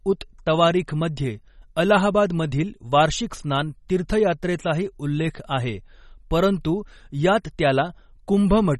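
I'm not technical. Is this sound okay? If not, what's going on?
No. The speech has a watery, swirly quality from start to finish, and s sounds come out metallic. The treble stops dead around 11.8 kHz. This is likely MP3 compression squeezed too hard, so the encoder dropped detail it judged unimportant.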